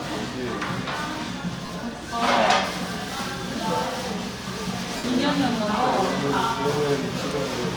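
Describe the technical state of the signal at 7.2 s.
Lost LE Audio frames hit from 7.19 to 7.22 s. That is a 22.5 ms gap, which fits about three missing frames. The LC3 decoder filled it by repeating the last spectrum with random signs. Tones there smear into a brief noisy blur.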